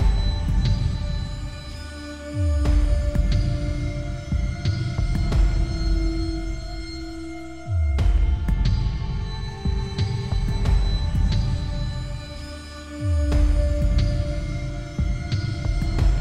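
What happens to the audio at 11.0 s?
Nothing goes wrong at 11.0 s; the audio is intact there, with no dropout, glitch or other audible fault at that moment.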